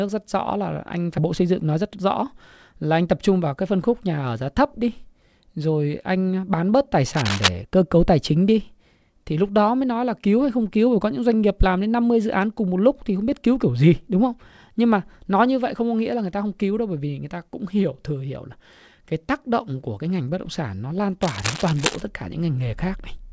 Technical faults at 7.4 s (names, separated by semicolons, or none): cable scratch noise